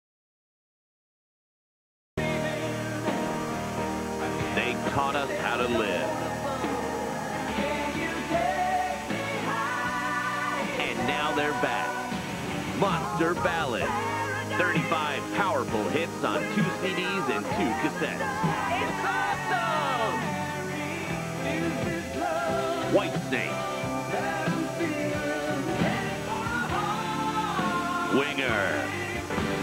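Right from the top, the clip sits in dead digital silence until about 2.18 s. That's an audio dropout to silence already under way when the file begins. There's no room tone or hiss at all, and then the sound arrives abruptly, mid-flow rather than with a natural start. The likely cause is that the input wasn't connected or was muted while the recorder kept writing, so whatever came before that point is simply gone.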